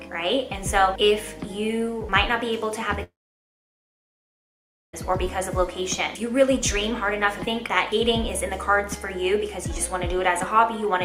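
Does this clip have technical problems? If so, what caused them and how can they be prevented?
Yes. From 3.03 to 4.95 s the sound breaks off. A brief, fading continuation of the last sound gives way to about 1.8 s of near silence, and the audio resumes with about 1.9 s missing. The likely cause is a long network dropout. On a spectrogram this shows as a short smeared tail followed by an empty band, and the waveform goes flat. A more stable connection, with redundancy or forward error correction on the stream, would prevent it.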